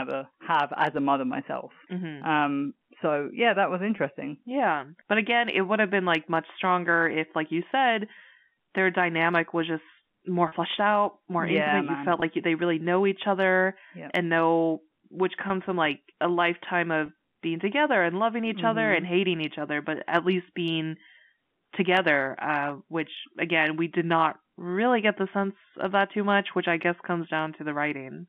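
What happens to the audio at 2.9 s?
Nothing goes wrong at 2.9 s: the speech there comes through intact, carried in the ordinary narrow band of a G.711 telephone line.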